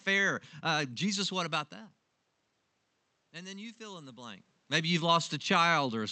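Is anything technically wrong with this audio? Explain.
Yes. From 3.34 to 4.51 s there is automatic gain rising: after the input level fell by about 17 dB, the gain control lifted its gain about 4 dB, so the voice and the room noise swell together.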